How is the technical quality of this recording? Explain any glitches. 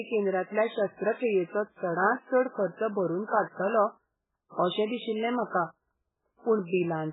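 Poor: heavy MP3 compression runs throughout the speech. Treble stops dead near 3.8 kHz, and starved frequency lines flicker on and off, giving a watery swirl that plain filtering wouldn't. The cause is likely a very low bitrate, around 8 kbps.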